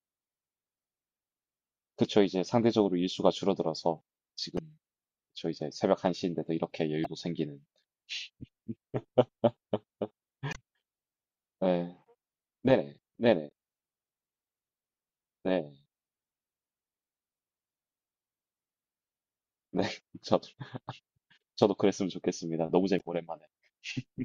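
Five brief bursts of damaged data in the compressed stream interrupt the speech at 4.55–4.59 s, 7.02–7.06 s, 10.50–10.56 s, 13.47–13.52 s and 22.96–23.01 s, each lasting about 40 to 60 ms. In each spot, corrupted bytes caused the decoder to misread frames and lose sync until it found a valid frame header again. The result is a short chirp, squawk, click or hole in the voice.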